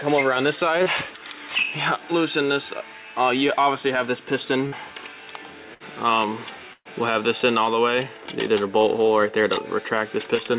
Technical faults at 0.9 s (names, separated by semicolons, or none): short concealed packet loss